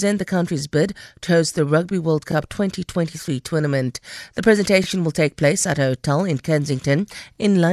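A brief stutter at 2.32–2.34 s, 4.84–4.86 s (just before "will take place at") and 7.36–7.38 s comes from overlapping chunks: every 2.5 s, about 21 ms of speech replays at each join.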